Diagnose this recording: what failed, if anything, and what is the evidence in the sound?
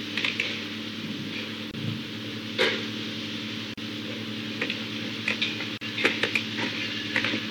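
Brief silences cut into continuous sound at 1.71 s (26 ms), 3.74 s and 5.78 s (38 ms each), every 2 s, edges smeared, sound resuming where it stopped. Codec stage: a gap at a join of encoded pieces, with encoder delay and last-frame padding left untrimmed.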